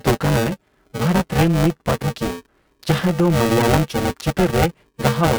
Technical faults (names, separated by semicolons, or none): buffer tearing